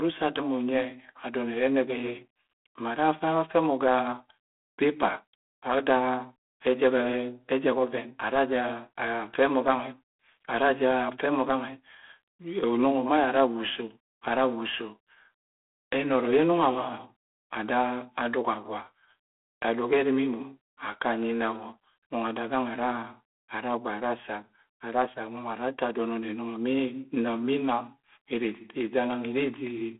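From start to finish, the speech carries G.726 ADPCM coding damage. The codec sends each sample as a small difference from a running prediction. Too few bits go to that difference. The rasping, gritty hiss rides on the speech and rises with its level, which fits a 24 kbit/s rate. The band is telephone-narrow, about 250 Hz to 3.5 kHz. Nothing passes above 3.8 kHz. The result sounds thin and harsh.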